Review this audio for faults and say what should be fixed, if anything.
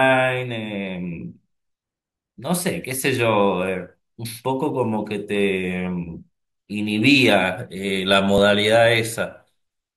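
Underrun with held sample at 8.38 s: the output buffer ran dry for about 2 ms, and the converter froze on its last value, flattening the speech waveform briefly. No audio was lost, so playback resumes where it stopped. Enlarging the output buffer or giving the audio thread higher scheduling priority would prevent it.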